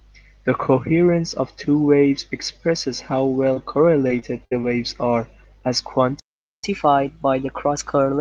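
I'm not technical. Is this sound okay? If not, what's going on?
No. At 3.53 to 3.58 s there is a short concealed packet loss. About 20 ms of audio never arrived, and the receiver covered the hole by extending the preceding sound and blending back in. It comes across as a brief smear or wobble.

From 4.08 to 4.65 s there is repeated packet loss, which gives a robotic sound. Four separate gaps, the longest about 58 ms, were each patched by continuing the last sound. About a fifth of that stretch is filler, so it sounds choppy.

At 6.20 s the audio stops dead for about 0.44 s and then resumes at 6.64 s. This playback stall is likely caused by the player running out of data, or by something briefly blocking it, so there was nothing to output.

From 6.64 s to the end, the player catches up at a higher speed to recover the lost time. It runs about 1.1 times faster, which also raises the pitch by roughly a semitone and a half. 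Everything in that final stretch sounds slightly rushed and higher.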